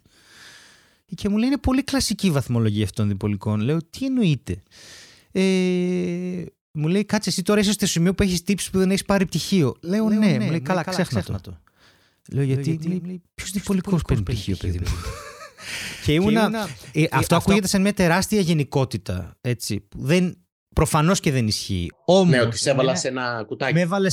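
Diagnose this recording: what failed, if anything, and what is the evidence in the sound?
Doubled audio track from 10.00 to 17.60 s, after "δεν έχει πάρει πτυχίο" until "σαν μια τεράστια γενικότητα". A dry, full-band copy about 5 dB down trails by roughly 200 ms and cuts in and out abruptly, likely from a second, slower capture path.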